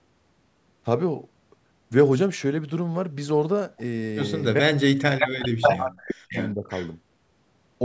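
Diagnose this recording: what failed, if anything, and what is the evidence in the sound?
Speech suppressed in double talk, in the call processing stage. From 4.6 to 6.35 s the speech falls away in pieces, by about 40 dB at its deepest, and again at 6.54 to 6.7 s by about 20 dB. The likely cause is an echo canceller turning down its own talker along with the loudspeaker echo. The waveform shows gapped, collapsed envelopes and the spectrogram shows dark holes.

Echo leak, also in call processing. A copy of the speech returns 576 ms late at 5.19 to 5.45 s, 5.62 to 5.73 s, 6.28 to 6.52 s and 6.7 to 6.91 s. It reaches about speech level, or about 5 dB above, then fades to about 15 and 20 dB below. This likely comes from loudspeaker pickup the canceller missed, and it shows as shifted duplicate patterns.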